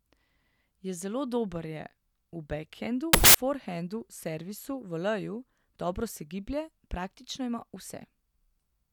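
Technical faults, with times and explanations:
3.13–3.35 s, samples built from the wrong bytes: the reader misassembled each sample's bytes, promoting noisy low bits to high ones, so the speech bursts into loud, harsh broadband noise.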